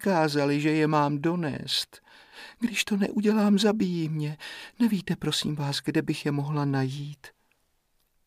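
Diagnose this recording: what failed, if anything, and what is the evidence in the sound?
Nothing failed; no stage in the chain left audible evidence.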